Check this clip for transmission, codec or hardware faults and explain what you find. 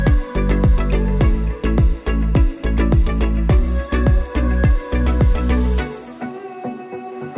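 No faults found; the audio runs continuous and stable throughout, with nothing to flag.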